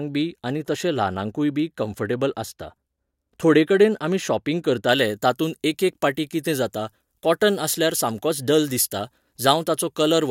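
From 4.89 s to the end, the speech has pre-emphasis left on: a 75 µs FM treble boost was never undone, lifting 10 kHz about 13 dB above 1 kHz. It sounds thin, bright and hissy on sibilants, and a spectrogram shows the upper bands suddenly denser.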